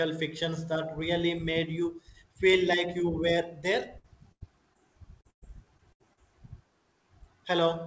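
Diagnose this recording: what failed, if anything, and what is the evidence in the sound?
Two bursts of packet loss, at 3.98 to 4.06 s and 4.32 to 4.47 s, make the speech freeze into a held, fading buzz or hiss before it picks up again further along. This is a network fault seen at the jitter buffer. Consecutive packets arrived too late or not at all, so the receiver stretched the last decoded sound and faded it down, roughly 60 ms and 90 ms of it, while about 60 ms and 80 ms of the real speech were skipped.

A brief smear at 4.74 to 4.77 s is short concealed packet loss, again on the network side. Only about 20 ms of audio failed to reach the decoder in time. The receiver bridged the hole by extending the preceding sound for about 10 ms and cross-fading back into the real signal, so it passes as a small wobble, and any short consonant there can drop out.

From 5.21 to 6.19 s the speech turns choppy. 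This is repeated packet loss with a robotic sound. Seven separate gaps fall in under a second, the longest about 110 ms, and synthetic fill makes up about 28% of the stretch. Each patch extrapolates the last sound, and the next loss arrives before the decoder recovers, so around 300 ms of real speech is lost. The audio passed through a G.722 call path with no content above 8 kHz.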